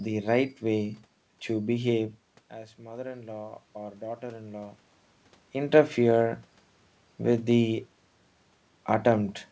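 From 2.76 s to 4.83 s there is automatic gain rising. Around 2 s the talker moves back from the microphone and the input falls by about 15 dB. The gain control judges it too quiet and raises its gain by about 5 dB over roughly two seconds, so the voice and the room noise swell together. On a waveform the envelope ramps up smoothly across that span. On a spectrogram the whole band brightens evenly, including the noise floor between syllables.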